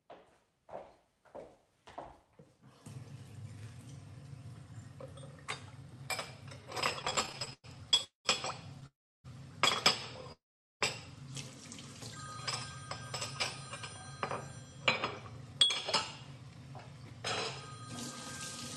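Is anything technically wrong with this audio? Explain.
Yes. The audio has two related network faults.

From 6.99 to 8.00 s there are repeated stalls (stutter). Packets arrived late, so the jitter buffer ran dry 16 times. Each time, the receiver stretched the last sound to cover the wait. About 265 ms was filled this way, with the longest gap at 104 ms. Nothing is lost. Instead the sound drags and stutters, and about a quarter of that second is patched.

Three call audio freezes follow, at 8.04 to 8.27 s, 8.86 to 9.26 s and 10.32 to 10.83 s. Each lasts longer than the one before, at 209, 378 and 485 ms. The likely cause is packets held up in transit, which emptied the jitter buffer. The last sound carries on briefly as a fading buzz or hiss, then drops to silence for 130, 310 and 420 ms. Playback resumes where it stopped, so gaps are inserted and nothing is skipped. The high frequencies stop at 12 kHz, as expected for this call codec.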